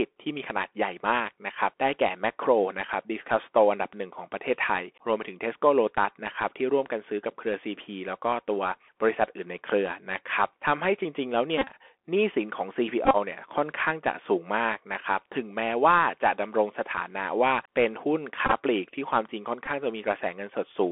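Right from the start the speech is squeezed through a Bluetooth CVSD headset codec, held to roughly 300 Hz to 3.4 kHz, which fits a 64 kbps CVSD link. That one-bit delta coding leaves a granular hiss underneath, and sibilants come out scratchy.

Then come Bluetooth headset packet repeats, where lost packets get filled by replaying the previous one. Between 11.58 and 11.72 s about 79 ms is patched, with the longest run around 30 ms. From 13.05 to 13.17 s it's about 64 ms, with runs near 20 ms. The longer runs turn into a brief buzz near 267 Hz. At 18.46 to 18.53 s about 38 ms is lost in short runs of around 10 ms. The last, 19.66 to 19.68 s, covers just 11 ms.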